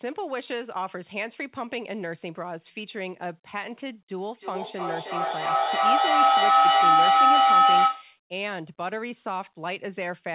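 Feedback howl runs from 4.39 to 8.21 s in this speech clip, a tone around 700 Hz with repeats roughly every 300 ms, peaking about 13 dB above the speech. The microphone is picking up a loudspeaker on the same call, and the loop gains level on each pass. The audio also stops at 4 kHz, which fits a narrowband G.711 call codec.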